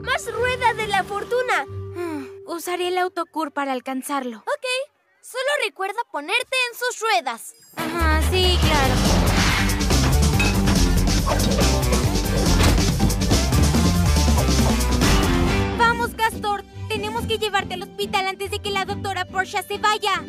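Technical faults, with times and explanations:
No technical faults can be heard anywhere in the recording, with the signal holding steady and continuous throughout.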